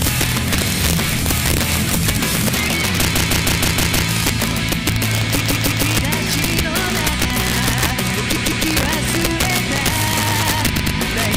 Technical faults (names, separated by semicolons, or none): integer overflow; repeated frames